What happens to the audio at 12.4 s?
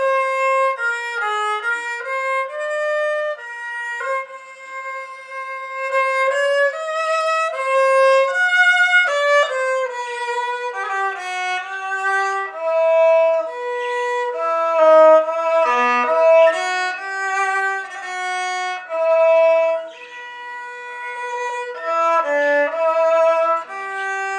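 At 12.4 s the sound is running slow and sitting lower than it should, about one and a half semitones flat, with everything stretched to 0.919 of its proper speed. This is a wrong sample rate fault that starts at 9.08 s and continues to the end of the clip. The samples are played back more slowly than they were captured, with no rate conversion, so pitch and tempo drop together. The ratio fits audio recorded at 24 kHz being played at 22 kHz.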